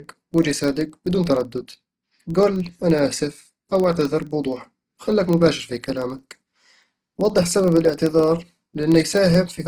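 Throughout the speech, the sound is rough and grainy, with tones smeared into noise instead of the hollow swirling of MP3. That points to Opus compression, likely at about 16 kbps in its music mode. The bandwidth stays full, so nothing sounds muffled.

Also present across the whole clip is a low buzz at about 23.4 Hz from a filter restarted on every block, which fits 2048-sample blocks at 48 kHz. Each block begins from silence and adds a small transient. Unlike mains hum, the buzz rises and falls with the speech level.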